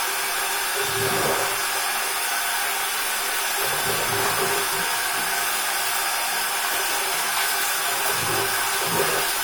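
A recording of sounds, with no technical fault to be heard anywhere in it. Nothing in the audio points to a problem in how it was captured, processed or delivered.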